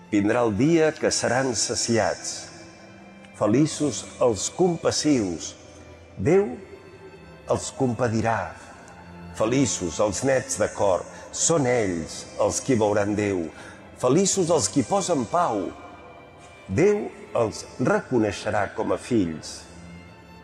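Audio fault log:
No audible faults were found in this recording.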